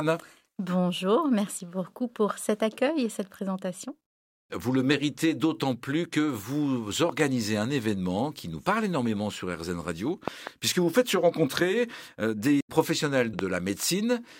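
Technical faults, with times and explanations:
7.09–7.22 s, 10.28–10.49 s and 13.39–13.41 s, loud pop: double pops after "d'autant plus que vous" and before "puisque vous faites se", a single pop after "rencontrer euh des professionnels", each about 15 dB above the speech. These are likely voltage spikes. On the waveform they appear as tall narrow spikes over the unbroken speech, and on the spectrogram as thin full-band vertical lines.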